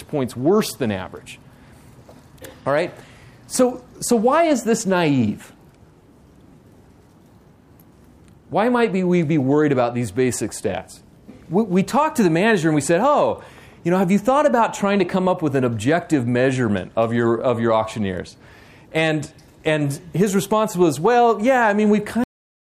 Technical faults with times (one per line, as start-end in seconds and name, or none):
22.24-22.80 cut-off end